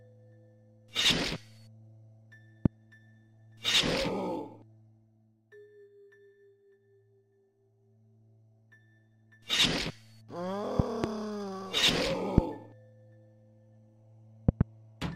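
Loud pops occur at 2.66 to 2.68 s, 10.80 to 11.06 s (a double pop), 12.38 to 12.41 s and 14.49 to 14.63 s (another pair). They peak about 20 to 25 dB above the sound, which continues underneath. Each is likely a sudden voltage step from a plug, switch or static.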